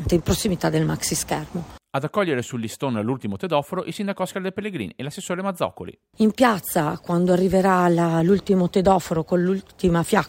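Nothing stood out on listening to this recording.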